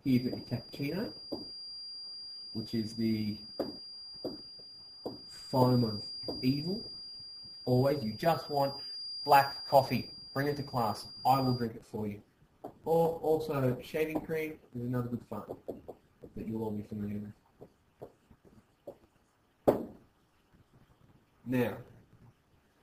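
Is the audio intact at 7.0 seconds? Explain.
No. At 7.0 seconds a feedback whistle is present, running from the start of the clip to about 11.70 seconds. It is a thin, steady tone at 4.8 kHz sitting roughly 15 dB below the main sound, swelling and fading slowly in level. The likely cause is a loudspeaker-to-microphone loop held just at the edge of instability, so a single high frequency keeps ringing without building into a full howl.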